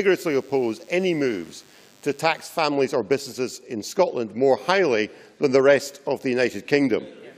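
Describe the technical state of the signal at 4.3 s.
At 4.3 s the signal is intact, with no audible technical fault at that moment.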